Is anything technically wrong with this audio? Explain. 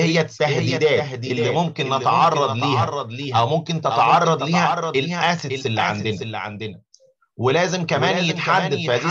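Yes. A doubled audio track runs through the whole clip. A second full-band copy trails about half a second behind, roughly 5 dB quieter. It has no decay or room colour. Likely cause: a slower second capture path or misaligned duplicate in an edit.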